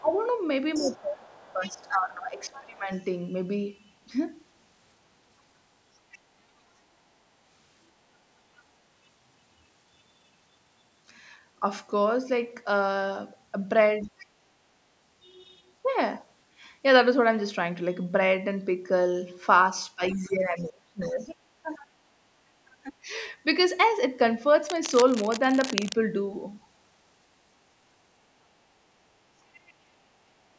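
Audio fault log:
0.0–2.9 s, 14.04–14.13 s and 19.95–23.12 s: speech suppressed in double talk. The talker's voice dips by around 20 to 25 dB and thins out in patches whenever the far voice overlaps, likely because the echo canceller turned both down together. Unlike a network dropout, the gaps follow the overlap, not a fixed rhythm.
0.74–2.63 s, 6.11–6.18 s, 14.02–14.26 s, 20.12–22.71 s and 29.53–29.73 s: other side's voice leaking through. A second voice sits well under the talker, at most about 15 dB down and mostly far quieter, likely loudspeaker sound the echo canceller left behind. Crosstalk sounds steady, but this comes and goes.
24.67–25.94 s: cable scratch noise. Dense, uneven scratching and rustling runs for about 1.3 s at about 10 dB below the speech, likely from a worn cable or connector being moved. Handling thumps are low and dull, but this is bursty and gritty throughout its span.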